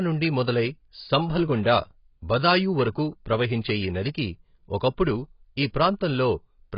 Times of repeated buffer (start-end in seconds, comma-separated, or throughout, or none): none